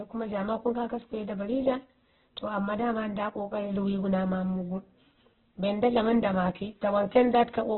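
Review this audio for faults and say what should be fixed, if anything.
Opus compression runs through the whole clip, likely from an encoder starved of bits. The sound points to a rate near 8 kbps in the codec's music-oriented CELT mode, narrowed to narrowband. With so little data, the encoder keeps each band's overall energy but fills the fine detail with folded copies of lower bands and noise. The speech therefore turns rough, grainy and noisy, with heavy damage and nothing above 4.3 kHz. Encoding at a substantially higher bitrate, with wideband or fullband allowed, would prevent it.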